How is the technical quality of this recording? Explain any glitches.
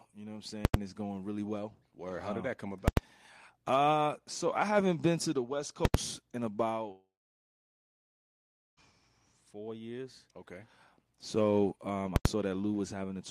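The speech is interrupted by four loud bursts held at one extreme value and one long gap.

Invalid numbers at full scale occur at 0.65–0.74 s (after "know what I'm"), 2.88–2.97 s (after "did um that come"), 5.85–5.94 s and 12.16–12.25 s. In each case a calculation produced invalid values that were pinned at one extreme value for a 0.09 s block, which fits a 4096-sample block. This is heard as a sharp pop at each edge with nothing in between, unlike a dropout's fading fill.

A long network dropout runs from 6.91 to 8.80 s, likely from lost packets. About 1.86 s of audio never plays. A brief fading continuation gives way to roughly 1.7 s of silence, and then the speech resumes with that part missing.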